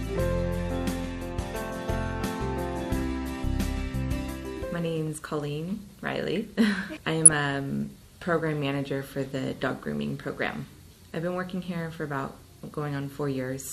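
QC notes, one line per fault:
throughout MP2 compression: plainly dull, gurgling and granular, likely from Layer II coding at a rate near 80 kbps; upper sub-bands flicker on and off as bits run short.
7.25–7.33 s DAB burbling: a brief burble of short noise blips in single sub-bands, which fits a few corrupted frames from sparse reception bit errors, unlike steady coding loss.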